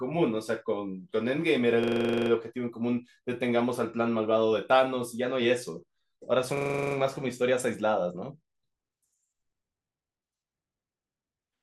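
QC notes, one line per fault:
1.84–2.30 s: system hang loop. The same 43 ms chunk repeats 11 times at 23.4 Hz, from a frozen driver cycling one buffer, which fits 2048 samples.
6.57–6.96 s: system hang loop. The same stall recurs with a 43 ms chunk repeating 9 times at 23.4 Hz. The speech resumes where it stopped, with essentially nothing skipped.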